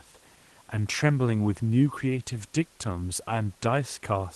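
A speech recording with no technical faults present.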